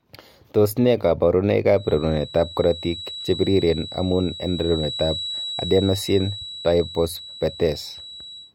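A speech clip with a feedback whistle: from 1.71 s to the end, a thin 3.9 kHz tone about 15 dB below the speech, likely from a speaker-to-mic loop sitting right at the edge.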